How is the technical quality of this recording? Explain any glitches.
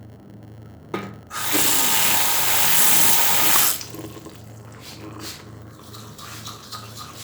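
The recording has one persistent fault. A block size mismatch (padded) runs for the whole clip. One stage writes shorter blocks than the next reads, and zeros fill the remainder. That puts a 100 Hz buzz over the sounds and slows playback to about 0.92 of normal speed with the timbre kept. The waveform shows a short flat gap every 10 ms. The spectrogram shows regular vertical striping with lines at multiples of 100 Hz.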